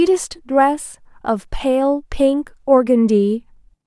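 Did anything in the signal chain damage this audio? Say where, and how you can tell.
No, nothing in the signal chain audibly damaged this speech clip. No stage between capture and playback leaves a mark that can be heard.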